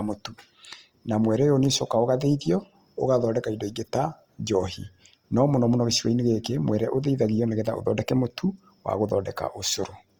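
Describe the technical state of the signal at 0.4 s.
At 0.4 s, as throughout, the speech has likely been through Opus compression in its music mode, fitting about 24 kbps; starved bands filled with noise leave it rough and grainy.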